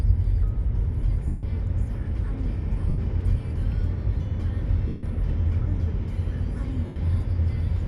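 Bluetooth LE Audio frames went missing four times, and each time the LC3 decoder filled the hole by reusing the last good spectrum with randomised signs, fading it as the gap went on. The lost LE Audio frames fall at 1.27 to 1.43 s (160 ms), 2.89 to 2.98 s (90 ms), 4.88 to 5.03 s (150 ms) and 6.86 to 6.96 s (100 ms), lengths that fit runs of 10 ms frames. Each gap becomes a brief noisy smear that thins toward silence.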